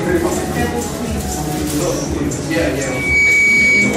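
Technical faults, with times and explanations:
2.77 to 3.97 s, loudspeaker feedback squeal: a single 2.3 kHz tone swells over roughly 0.4 s until it sits about 5 dB above the sound, because the microphone is hearing its own loudspeaker and the loop gain tops one at that frequency. Unlike a steady hum or test tone, it grows on its own rather than starting at full level.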